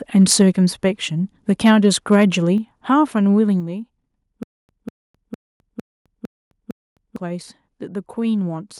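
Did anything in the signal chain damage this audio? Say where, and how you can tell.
Yes. Microphone overload is audible at 0.19–0.42 s and 1.65–2.25 s. The loudest peaks turn harsh and crackly, driven about 6 dB and then about 3 dB past full scale. The likely cause is input gain set too high at the converter, flattening the peak tops.

Microphone volume was stepped down three times, at 0.42 s, 2.58 s and 3.6 s. Voice and background drop together by about 2, 4 and 5 dB. The first step follows the distorted peak directly. This is likely call processing cutting device gain in reaction to clipping.

A stutter with silent gaps runs from 4.43 to 7.16 s. The same 196 ms fragment repeats six times, each followed by 260 ms of digital silence, giving a steady 456 ms cycle. Audio is lost between repeats. The likely stage is a stalled playback or stream buffer replaying its last chunk.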